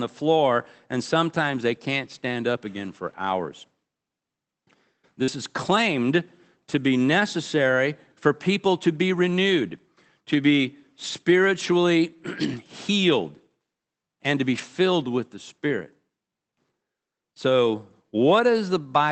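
Speech carried over a call path, with the codec audio band reaching about 8 kHz, which fits Opus in wideband mode. At 5.23 to 5.30 s, just before "is claimed to be", about 40 ms of audio failed to arrive in time, a short concealed packet loss. The decoder extended the preceding sound, repeating its pitch or shaped noise, for about 43 ms, then crossfaded back, leaving a brief smeared wobble. The final 20 ms of that stretch, 5.28 to 5.30 s, is a lost packet rebuilt from error correction. The next packet's low-bitrate backup copy was decoded there, so that sliver sounds grainier rather than extrapolated. The same kind of fault returns at 14.54 to 14.60 s, between "and to be" and "with the". About 40 ms, which fits two 20 ms packets, was restored from those embedded redundant copies. Nothing drops out, but the passage turns briefly rougher and noisier than the audio around it, a short coarse patch in the speech.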